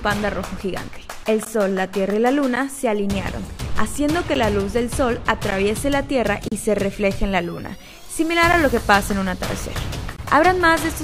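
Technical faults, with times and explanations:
1.45, 2.56, 4.35, 5.51, 6.48–6.52, 8.53 and 10.17–10.19 s, blocks of digital silence: the sound drops abruptly to silence and returns with no fade, heard as ticks or short holes depending on each block's length. The gaps run from 11.6 ms up to 34.8 ms. The recurring 11.6 ms holes fit a missed 512-sample output buffer.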